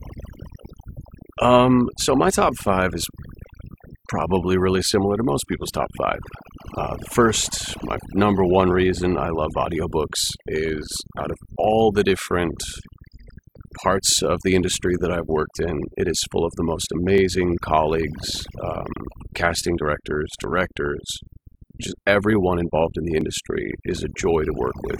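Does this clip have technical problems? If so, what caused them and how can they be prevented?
Yes, there are four problems here.

Overdone noise removal runs through the whole speech clip. The reducer was set so hard that it turns down any frequency band near its noise estimate, and quiet parts of the voice go with it. The result is near-silent gaps with twinkly specks. Back the reduction amount off and let a little noise floor through.

GSM signalling bursts show up from 5.52 to 6.48 s and again from 19.12 to 20.87 s, right after "colleagues um". A 2G phone close by was sending short groups of radio bursts, and the audio circuit rectified them into galloping ticks and brief 217 Hz buzzes, roughly 20 dB under the speech. Keep phones away from the gear, or put them in airplane mode.

GSM phone buzz takes over from 6.60 to 7.93 s, stopping just before "number one reason I". Here the phone was in a call and transmitting continuously at 217 bursts per second. 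That gets rectified into a hard, raspy buzz full of harmonics, about 18 dB below the speech. Same fix: keep phones off or well clear of the mic and cables.

Overlap between stream segments causes small skips at 11.20–11.24 s, 17.18–17.22 s (between "full of the most" and "colleagues um"), and 23.21–23.25 s. Timestamps on adjacent segments overlapped, so the player trimmed roughly 40 ms of real audio each time and the waveform jumped. The spacing fits 2-second segments. Fix the segmenter's timestamps so segments butt up exactly.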